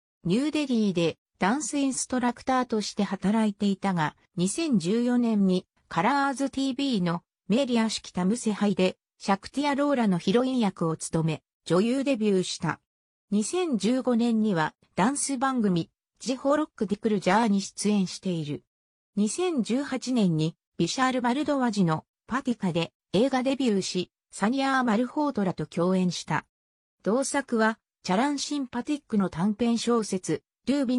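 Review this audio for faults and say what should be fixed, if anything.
Nothing here needs fixing; I listened through and didn't hear anything that called for attention.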